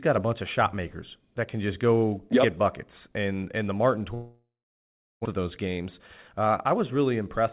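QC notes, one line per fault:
4.14–5.27 s, long network dropout: the last sound smears into a fading buzz, then about 0.72 s of silence. Likely a network stall, with roughly a second of audio lost.
5.37–5.81 s, jitter buffer speed-up: the speech runs about 8% fast at unchanged pitch, with around 40 ms of pitch periods trimmed to catch up after the gap.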